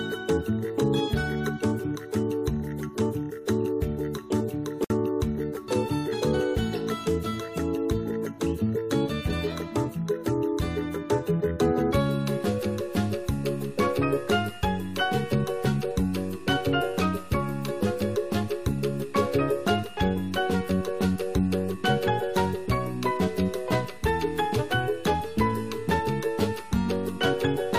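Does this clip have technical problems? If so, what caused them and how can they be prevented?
Yes. The audio was encoded in separate pieces and joined without trimming the encoder's start-up delay and last-frame padding, leaving a gap at a join of encoded pieces. At 4.84 s the sound drops out in a gap of 57 ms, until 4.90 s, before resuming exactly where it left off; the codec smears the hard edges of the dropout, so the silent part is shorter than the gap. To prevent it, encode the material as one continuous piece or trim each piece's delay and padding before joining.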